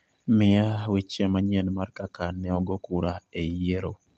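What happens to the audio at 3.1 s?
Nothing goes wrong at 3.1 s: the speech carries on intact through the WebRTC call path, with only the narrowed, coded sound that path gives it throughout.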